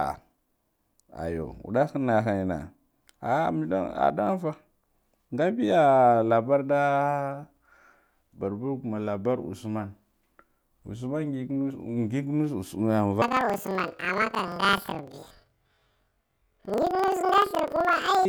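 From 13.22 s to the end at 18.28 s, the speech jumps an octave high with a fast flutter at about 23.4 Hz. This is planar audio read as interleaved. Each 42.67 ms block, which fits a 2048-sample block, plays left then right at double speed.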